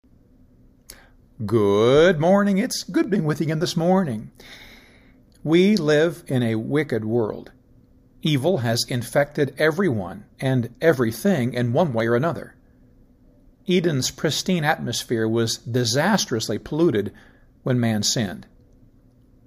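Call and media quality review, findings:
Regular clicks through the speech, about ten in all, every 2.24 s from 0.81 s to 18.73 s. Likely clock drift buffer slips: two devices on separate clocks about 150 ppm apart, so the buffer between them drifts until a block of around 15 samples is dropped or repeated.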